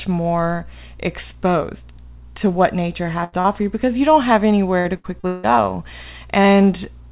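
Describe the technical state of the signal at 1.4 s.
At 1.4 s the speech is intact, with no fault at that moment; the sound stops at about 4 kHz, which fits a G.711 mu-law call codec running at 64 kbps.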